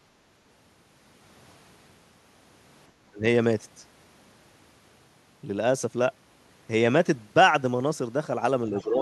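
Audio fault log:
2.96 to 3.23 s, speech suppressed in double talk: the talker suddenly sinks by about 25 dB, likely the echo canceller ducking everything while both ends spoke together.
8.75 to 8.85 s, other side's voice leaking through: a faint scrap of the far-end talker sits about 20 dB down, likely residual loudspeaker echo the canceller missed.
8.83 to 9.01 s, speech suppressed in double talk: a shallower dip of about 10 dB at the very end, likely the canceller again turning down the overlap.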